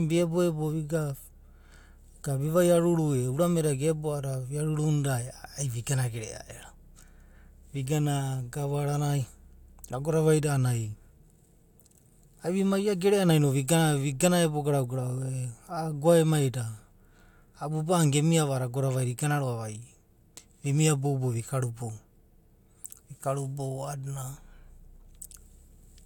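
Nothing stood out on listening to this speech recording.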